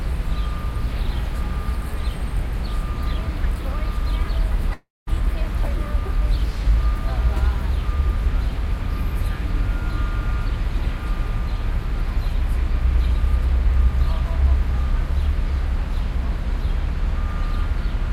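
At 4.73 s the sound breaks off into a buzzy continuation of its last moment that fades away, leaving near silence for roughly 0.21 s before the audio resumes at 5.09 s, with about 0.34 s of material simply gone. This is likely a long network dropout: packets stopped arriving, the receiver stretched the final sound to cover the gap until that wore thin, and playback picked up later without the lost stretch.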